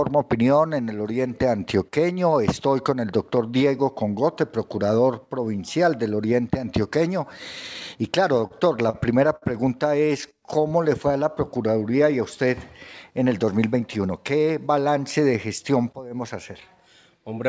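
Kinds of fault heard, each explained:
Repeated stalls (stutter): Between 8.38 and 9.44 s the audio arrived too slowly for playback and the buffer ran dry seven times. Each gap, the longest 59 ms, was bridged by extending the previous sound, adding 160 ms in total. Nothing is lost, but the passage drags and stutters.
Jitter buffer slow-down: From 10.00 to 11.24 s the receiver rebuilt its reserve by repeating individual pitch periods and bits of pauses. This stretched the passage by 125 ms, so it plays at 91% speed with unchanged pitch and sounds drawn out.
Jitter buffer speed-up: From 13.25 to 14.33 s the buffer held more than its target, so the receiver trimmed short pitch-period slices to reduce delay. About a tenth of a second was removed. The audio runs at 108% speed at the same pitch and sounds hurried, heard over the G.722 band limit, with nothing above 8 kHz.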